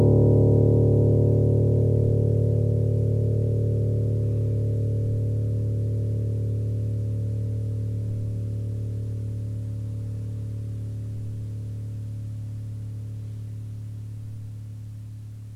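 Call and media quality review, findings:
Grainy, signal-following distortion across the whole clip, roughly 0 to 16 s. Worst on quiet passages and decays, which go gritty and sputter out instead of fading smoothly. Error floor sits around 45 dB under the signal. Likely low bit depth without dither: 10-bit rounding somewhere in the chain, so the error tracks the sound rather than hiding as a steady hiss. Worth checking the format conversion stage.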